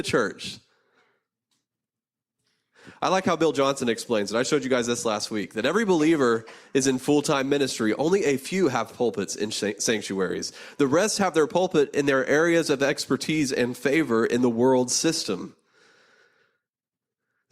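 At 3.22 to 3.24 s, a corrupt frame decoded produces a brief glitch in the speech. Flipped bits reached the decoder, which played the damaged data anyway. Misread gains and codes placed energy at the wrong frequencies. The burst lasts about 20 ms, which fits a few consecutive frames. It is quiet, peaking around -35 dBFS. A second, similar glitch comes at 7.81 s. It is shorter, consistent with a single damaged frame, and about as quiet.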